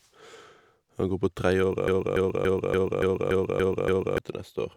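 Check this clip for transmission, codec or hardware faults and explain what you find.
One fault is present, a broken-record loop running from 1.88 s to 4.18 s. A fragment of speech about 0.29 s long plays eight times back to back, each repeat identical. The likely cause is a stall in the player, encoder or stream, with the last buffered fragment resent until data resumed. The speech that belonged in those 2.3 seconds is missing, so the clip jumps forward once the loop ends.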